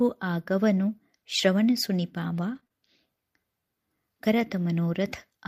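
At 2.55 to 2.57 s there is a brief patch of rougher, noisier speech with no gap. This is a lost packet rebuilt from error correction: one 20 ms packet went missing, but the following packet carried a low-bitrate copy of it, as Opus in-band forward error correction allows. The decoder played that coarser copy in its place, so the speech keeps flowing but loses texture for that frame.

Right after, from 2.59 to 2.72 s, the speech smears and wobbles through three back-to-back spans: 2.59 to 2.64 s, 2.64 to 2.67 s and 2.67 to 2.72 s. Each is a short concealed packet loss. A 20 ms packet failed to arrive in time each time, and the receiver invented sound to cover the hole by extending the preceding pitch or shaped noise. It then crossfaded back into real audio, with the synthetic fill lasting about 23, 16 and 26 ms respectively. Run together like this, the repeated guesses blur the speech across roughly an eighth of a second.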